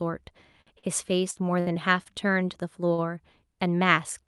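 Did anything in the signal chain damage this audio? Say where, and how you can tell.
Yes, the damage happened at the network and jitter-buffer stage of a call path, and it shows up in three distinct ways.

Short stalls from late packets occur at 0.61–0.70 s, 0.79–0.88 s, 2.03–2.09 s and 2.94–3.01 s. In each one a sound is held too long, with a faint buzz or dip, and then the speech picks up exactly where it left off. That pattern shows the jitter buffer ran dry and stretched the last sound to cover the wait. The holds last about 52, 45, 23 and 42 ms, and almost no speech is lost.

Bursts of packet loss occur at 1.31–1.39 s and 1.60–1.69 s. In each, the sound before the gap turns into a held, fading buzz or hiss, and the speech resumes further along than it should. That is loss concealment covering packets that never arrived in time. Roughly 60 ms of speech is missing at each point, papered over by about 52 and 63 ms of synthesized continuation.

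A jitter buffer slow-down runs from 1.74 to 2.44 s. Across this stretch the speech drags at about 93% speed while the pitch stays unchanged, with drawn-out sounds. This happens when the receiver rebuilds its reserve by repeating single pitch periods and slivers of pauses. In total it adds about 53 ms, right after the second loss burst.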